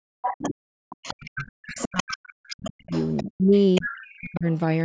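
From the very start to 0.56 s the talker's speech sinks away in pieces, dropping by as much as about 40 dB for roughly half a second in total. This is speech suppressed in double talk, likely because the echo canceller could not tell the near talker from the loudspeaker echo while both sides spoke and turned everything down. Overlapping this, from 0.22 to 0.54 s, a second voice comes through only about 5 dB below the speech: the other side's voice leaking through, where echo from the talker's loudspeaker was likely not fully removed from the microphone.

The same pattern returns at greater length. Between 0.90 and 4.46 s the talker's speech again dips and cuts out, by up to about 40 dB, for roughly two seconds in total, the double-talk suppression reappearing. Inside that stretch the far voice leaks through three times: faintly from 0.90 to 1.26 s at about 20 dB below the speech, more clearly from 1.76 to 3.23 s at about 15 dB below, and more strongly again from 3.75 to 4.37 s at about 10 dB below.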